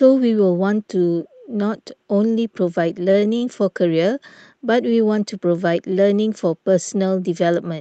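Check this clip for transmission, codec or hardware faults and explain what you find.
The clip has four short stalls from late packets. They come through a WebRTC call path whose Opus coding limits the audio to about 8 kHz. The stalls fall at 3.11 to 3.26 s, 3.20 to 3.24 s, 3.37 to 3.44 s and 4.90 to 4.93 s. Each time, the jitter buffer ran empty, so the receiver stretched the last sound by 26, 19, 42 and 17 ms, then resumed without loss. The speech holds briefly, with a faint buzz or dip.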